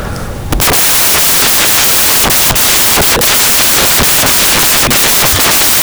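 A speech recording is buried from start to finish under loud, harsh broadband noise, close to white on louder passages, the sign of samples built from the wrong bytes. The reader assembles each sample incorrectly, through a one-byte offset, reversed byte order or a wrong alignment, so the rapidly fluctuating low-order bits end up as the most significant part of every value. Unlike ordinary background hiss, which sits underneath the signal, this noise is the signal itself, scrambled.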